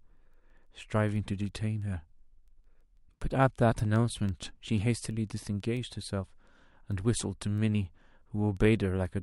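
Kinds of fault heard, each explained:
Word clock ticks: from 0.17 to 9.22 s, sharp ticks roughly every 0.15 s, as an unlocked receiving clock drifts and drops or repeats single samples.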